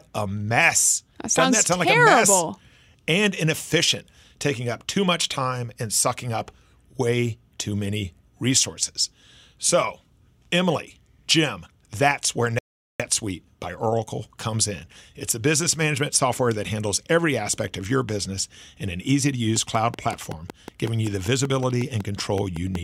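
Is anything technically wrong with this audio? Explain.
Yes, two faults are audible.

A rebuffering stall hits at 12.59 s, just after "that's where": the player ran dry of downloaded data and paused, so the speech drops to silence for 0.41 s and resumes exactly where it stopped. On a waveform this is a flat gap with no missing material either side.

A train of clicks runs from 19.56 s to 22.76 s, beginning after "in an easy to": around twenty near-identical pops at a regular 5.33 per second, peaking about 10 dB above the speech and ticking through the pauses too. Interference from nearby equipment, a faulty connection or a power supply is the likely cause. A spectrogram shows evenly spaced thin vertical broadband lines.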